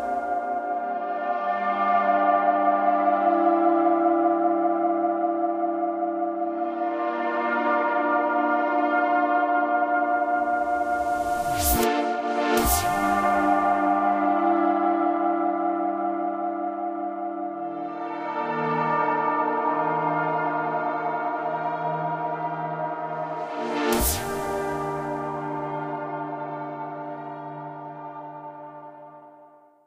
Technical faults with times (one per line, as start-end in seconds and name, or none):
none